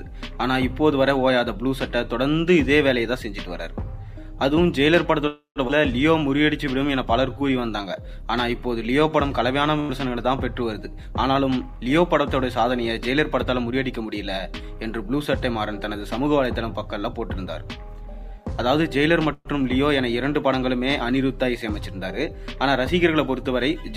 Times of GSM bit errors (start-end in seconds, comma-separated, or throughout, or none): none